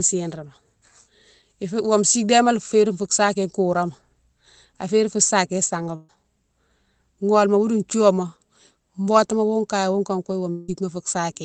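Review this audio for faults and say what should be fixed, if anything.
At 5.95 to 6.11 s the speech turns into a held, fading buzz or hiss for about 132 ms, then resumes with roughly 140 ms skipped. This is a burst of packet loss: several packets in a row arrived too late or not at all, so the receiver stretched the last sound and faded it to cover the gap. Enabling forward error correction or a slightly deeper jitter buffer would help recover short bursts like this.

From 10.51 to 10.70 s a similar fading fill lasts about 174 ms and never drops to silence. The speech then picks up further on, with around 180 ms gone. The likely cause is a long network dropout, where the stream briefly stopped arriving and concealment filled the hole without recovering the lost part. A more stable connection or redundant transmission would prevent this gap.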